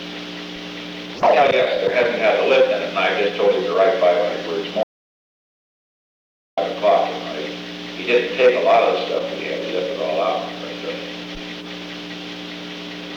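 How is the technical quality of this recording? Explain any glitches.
There is one clear glitch: an audio dropout to silence from 4.83 s to 6.58 s, lasting 1.74 s. The sound stops abruptly mid-flow, and the gap is silent with no room tone or noise floor, then the audio resumes just as abruptly. The likely cause is a brief loss of the input signal, through a disconnect, link failure or momentary mute, while the recorder kept writing silence. Whatever occurred during that interval is not recoverable.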